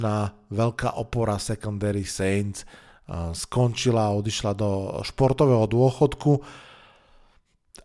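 Nothing in this bit of speech jumps out as a technical fault; there's simply nothing here to flag.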